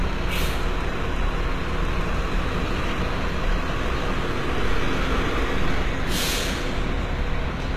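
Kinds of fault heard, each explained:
HE-AAC compression: The top end here has that synthetic sheen you get when only the lower spectrum is really coded and the treble is rebuilt by copying lower bands upward under a rough envelope, so this is likely HE-AAC at a low rate, something like 20 kbps. The damage is plainly audible all the way through: the highs sound bright but gritty and not quite tied to what's underneath, and nothing comes through above 14.9 kHz.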